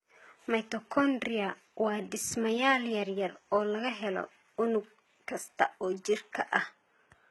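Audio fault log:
Throughout, low-bitrate audio saved at a high bitrate: the speech keeps the artefacts of its first encoding, with nothing above 19.8 kHz, likely a 16 kbit/s HE-AAC source re-saved as high-rate MP3.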